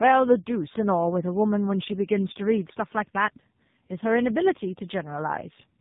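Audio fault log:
throughout tandem speech coding: the speech was decoded and re-encoded at each link, passing two speech codecs in a row, which fits GSM full rate then AMR-NB at 7.4 kbit/s. Nothing reaches above 3.8 kHz. Unlike a single low-rate codec, the artefacts compound, sounding rougher and more warbly.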